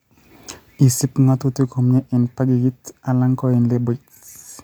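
Listening to this speech recording, nothing stood out as a technical problem.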